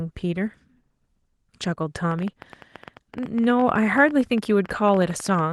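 A train of clicks runs from 2.11 s to 5.40 s, most likely from electrical interference or a faulty connection or power supply injecting short pulses into the signal. They arrive about 13.7 times per second at an uneven pace, roughly fifty in all, each with much the same sharp shape and peaking a few decibels above the speech. The result is a ragged ticking that sits on top of the speech and carries on through its pauses, over the light coding damage of the Opus voice compression.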